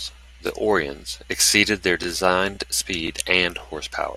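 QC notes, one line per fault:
0.47–0.49, 0.99–1.01, 1.51–1.53, 2.03–2.05, 2.55–2.57, 3.07–3.09 and 3.59–3.61 s: overlapping chunks. The speech runs in 0.5 s blocks, and each block begins 20 ms before the previous one finished, so that slice plays twice and produces a stutter-click at each join. Unlike a dropout, nothing is missing; the audio doubles. The strictly even 0.52 s spacing separates it from random glitches.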